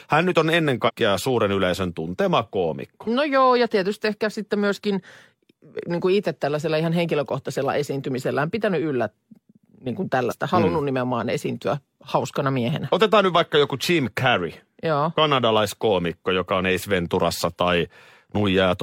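At 0.84 s and again at 10.27 s the speech jumps ahead, which is compressed frames being skipped. The decoder never played them. The first gap loses around 150 ms, about three 46.4 ms frames; the second, about one.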